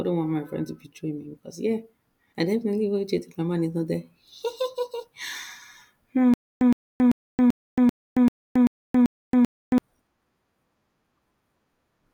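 From 6.34 to 9.78 s, a stutter with silent gaps. A 114 ms burst repeats nine times, with 274 ms silences. Likely cause: a stalled stream.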